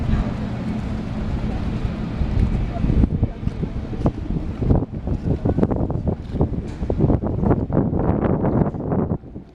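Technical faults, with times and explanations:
No technical faults detected at any point in the audio.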